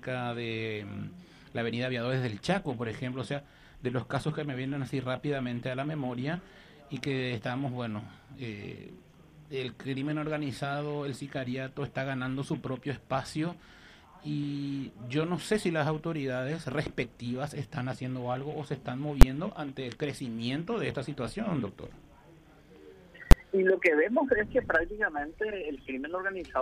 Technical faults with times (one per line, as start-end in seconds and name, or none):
19.21 invalid numbers at full scale
23.31 invalid numbers at full scale